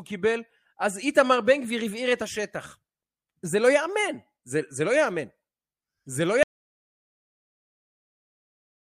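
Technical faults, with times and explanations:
6.43 s to end, audio dropout to silence: the input was likely lost while the recorder kept writing zeros, so speech stops abruptly into total silence without room tone.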